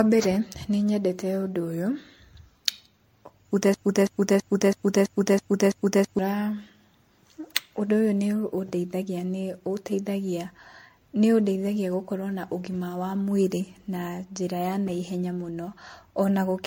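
Generation loss runs through the whole of this speech recording. Nothing is present above 16.5 kHz, and the sound is swirly, smeared and hollow, with blurred attacks. The likely cause is the audio being re-encoded as MP3 around seven times, at a rate consistent with 64 kbit/s, each pass adding fresh quantisation noise. A broken-record loop occupies 3.74 to 6.19 s. A 0.33 s fragment repeats seven times back to back, most likely from a stalled player or stream resending its last buffer, so the audio meant for that stretch is lost.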